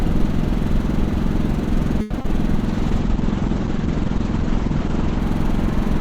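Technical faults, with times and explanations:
2.01–2.12 s, short stall from a late packet: a late packet emptied the buffer, so the last sound is held about 90 ms. On a spectrogram, frozen, smeared partials fill the gap.
2.18–2.21 s and 2.21–2.26 s, short concealed packet loss: about 60 ms never arrived and was filled by extending the preceding sound, giving a brief smear. The waveform shows a repetitive patch with a soft join.
2.67–5.26 s, call bitrate drop: the encoder was starved of bits, suggesting a fall from around 96 to 10 kbps. The sound turns rough and muffled, and the spectrogram shows a hard ceiling at 8 kHz instead of 20 kHz.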